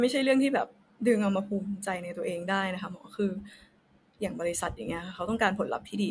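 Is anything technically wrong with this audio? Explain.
No, nothing technically wrong turns up anywhere in this speech recording, so there's nothing to flag here.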